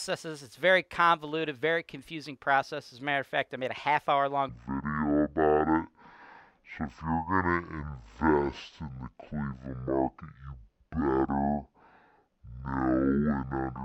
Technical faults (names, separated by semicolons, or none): stereo read as mono